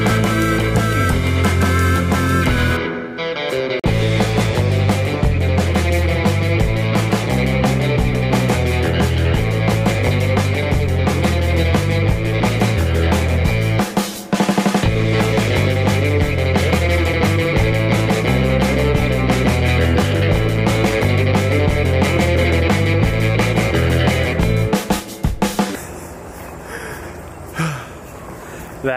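A Bluetooth dropout occurs from 3.80 to 3.85 s: the sound cuts to silence for about 58 ms, then returns already further along, as if it had kept playing during the hole. This is likely a wireless link failure, where packets carrying the audio reached the headphones too late and were discarded. Nothing was available to fill the gap, and the missing stretch, consistent with roughly two lost frames, is never recovered.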